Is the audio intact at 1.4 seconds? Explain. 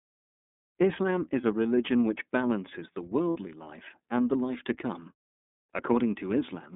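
No. From 1.41 to 1.45 s the sound becomes a brief held, slightly buzzy vowel. These are lost iLBC frames: a 30 ms gap, consistent with one dropped frame, which the decoder filled by repeating the last pitch cycle mixed with noise. Throughout, the iLBC codec makes it slightly rough and synthetic, with nothing outside 200 Hz to 3.7 kHz, which fits its 13.33 kbps mode with 30 ms frames.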